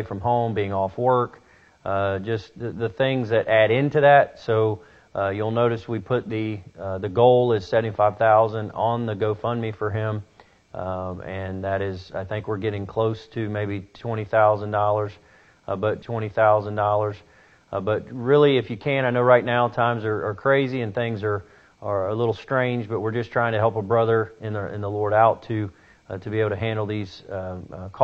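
At 15.98 s the player fetched or queued the same stream segment twice, so this is a stream segment repeated fault. About 2.04 s of audio, up to 18.02 s, plays again, with a small blip at the jump back into the repeat.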